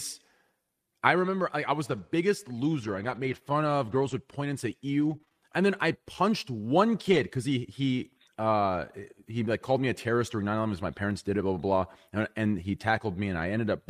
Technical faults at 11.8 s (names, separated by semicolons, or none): lost packet rebuilt from error correction